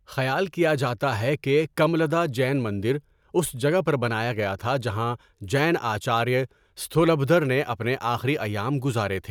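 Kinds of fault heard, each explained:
No kinds of fault are heard in this clip.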